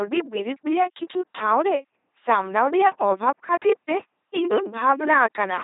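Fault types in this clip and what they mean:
LPC-10 vocoder: speech is rebuilt from a short filter driven only by pulses or noise, so it sounds heavily buzzy and robotic, with nothing above 3.8 kHz.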